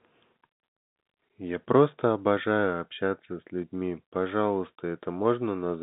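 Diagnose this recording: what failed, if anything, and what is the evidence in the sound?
Nothing failed: the sound carries the narrow telephone band of G.711 coding with nothing above about 3.8 kHz, and no fault shows anywhere in the recording.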